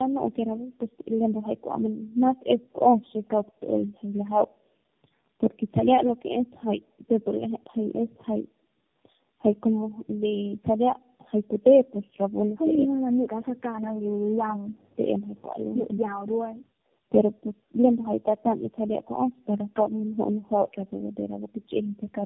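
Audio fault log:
Throughout: tandem speech coding. The speech sounds rough, muffled and warbly, with nothing above 3.6 kHz, because three speech coders in a row each re-encode the previous one's degraded output.
12.85–15.01 s: speech suppressed in double talk. The speech dips by about 40 dB in pieces totalling around 1.5 s, likely an echo canceller ducking the talker while both sides spoke.
15.36 s and 15.98–16.43 s: a faint delayed copy of the speech arrives 214 ms late at about 35 dB down, likely echo leak. Then speech suppressed in double talk chops the speech by about 40 dB for roughly 0.4 s.
16.71–16.91 s: background gated by the echo canceller. The room sound drops by about 40 dB for about 0.2 s while the canceller clamps the microphone, then returns.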